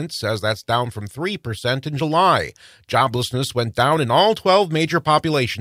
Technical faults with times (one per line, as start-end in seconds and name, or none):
none